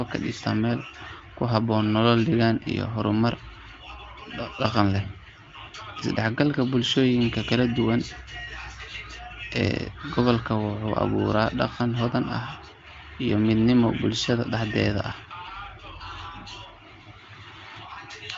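Speech carried over an AMR wideband (HD Voice) link at 23.05 kbit/s, band-limited with nothing above 7.7 kHz as that path gives, and no technical fault to report.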